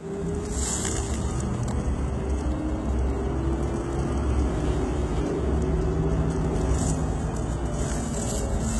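Throughout the clip, heavy HE-AAC compression, likely at a very low bitrate around 16 kbps, replaces the upper spectrum with treble rebuilt from copied lower bands. That top end sounds gritty and metallic, misaligned with the real harmonics, and stops dead at 11.8 kHz.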